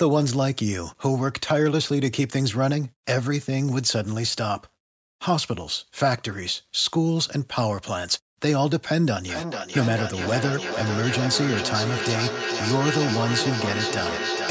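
Speech, and from 9.28 s to the end there's a feedback echo between two devices. Each phrase comes back roughly every 400 ms, getting thinner and more ringing with each pass, and the loudest repeat sits only about 6 dB under the direct speech. A second device in the room is playing this call aloud and the first device's mic is picking it up again, which the first device's echo canceller can't remove. The top end stops at 8 kHz, which is normal for call mic processing.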